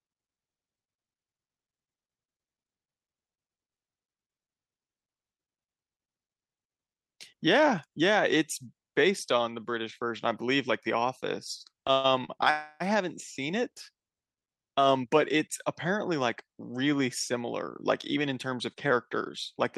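Call audio freeze at 11.92 to 12.07 s, and again at 12.51 to 12.82 s: the sound stops advancing and the last moment is carried forward as a fading buzz, for about 119 ms the first time and 296 ms the second. Neither drops to silence. When the audio resumes, it picks up exactly where it left off with nothing lost. Each freeze adds that much delay to the call, the likely cause being packets held up in transit until the jitter buffer ran dry.

Short stall from a late packet at 12.25 to 12.31 s, between the two freezes: one packet missed its slot, so the receiver stretched the last sound for 38 ms until it arrived. The result is a briefly held sound with a faint buzzy dip, after which the audio continues from the same point. Nothing is missing, but the delay grows by those 38 ms.

Jitter buffer speed-up from 18.16 to 19.30 s: holding more audio than it aims for, the receiver trims the delay back by repeatedly cutting tiny pitch-period-sized pieces out of the signal. 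About a tenth of a second is removed in total, so the speech runs at roughly 107% speed with its pitch unchanged and sounds slightly hurried.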